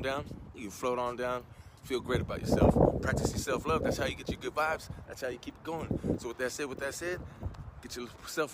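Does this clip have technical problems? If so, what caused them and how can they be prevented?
No, this clip has no technical problems, so there is nothing to trace or prevent.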